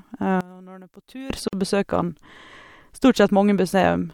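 A speech recording with two separate faults. From 0.41 to 1.30 s the level collapses by about 20 dB, leaving only a faint copy of the speech. The likely cause is one channel inverted: one stereo channel has reversed polarity, so the material shared by both channels cancels when they are summed to mono and only their small difference remains. On a waveform this section shrinks abruptly to a narrow band. A spectrogram shows the whole stretch dimmed. Shortly afterwards, at 1.48 s, the speech drops into a silence of about 48 ms and resumes at 1.53 s, picking up where it left off. This is a gap at a join of encoded pieces: two separately encoded segments were butted together without trimming the encoder's start-up delay and end padding. The waveform shows a flat, near-empty notch with slightly smeared edges. On a spectrogram it appears as a thin vertical blank strip across all frequencies, its borders slightly blurred by the codec.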